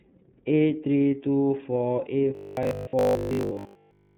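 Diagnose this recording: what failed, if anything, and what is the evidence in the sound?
iLBC codec, throughout (codec stage): nothing passes above 4 kHz, and the speech sounds rough and synthetic, which fits the 30 ms, 13.33 kbps mode coding each frame independently.

Robotic sound from repeated short buffers, 2.35 to 4.17 s (driver or buffer stage): a rigid 50 Hz buzz, likely from replaying 20 ms chunks that replace most of the real audio.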